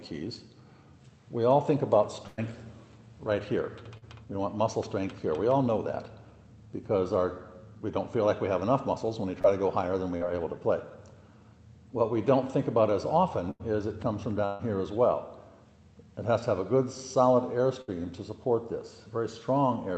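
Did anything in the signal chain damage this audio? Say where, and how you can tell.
Yes, a burst of packet loss on the network at 2.27, 13.51, 14.45 and 17.81 s: the last sound holds and fades for 60 to 140 ms, then skips ahead.

Short concealed packet loss, also network, at 3.97, 9.42 and 10.17 s: 20 to 40 ms holes patched by extending the preceding sound, heard as brief smears.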